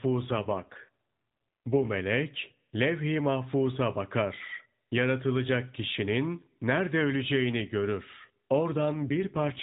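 Two AMR rate drops land at the edges, from 0.30 to 1.93 s and again from 8.94 s to the end. Each time the speech keeps its narrowband telephone band with no gap, but it turns rougher and buzzier, which fits the link stepping down from 12.2 to about 5.9 kbps and spending the freed bits on error protection. In between, the AMR-NB coding at the full rate has only a mild synthetic edge.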